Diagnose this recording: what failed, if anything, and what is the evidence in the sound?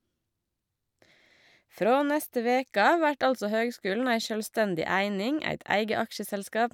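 Nothing failed; no fault is audible in this recording.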